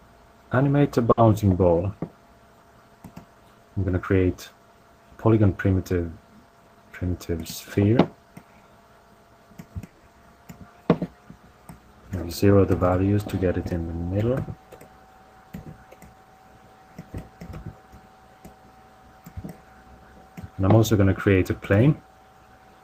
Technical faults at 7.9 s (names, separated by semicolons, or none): none